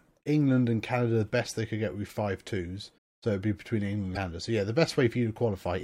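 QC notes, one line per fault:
2.97 s, broken MP3 bit reservoir: a brief glitch and jump ahead in the speech, likely from dropped frames leaving the next frame to decode another frame's bytes.
4.14–4.17 s, broken MP3 bit reservoir: a short glitch with skipped audio, likely lost frames, its length fitting roughly one 26 ms MP3 frame.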